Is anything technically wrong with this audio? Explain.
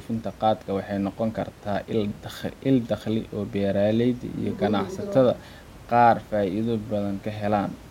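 No, nothing technically wrong can be heard here.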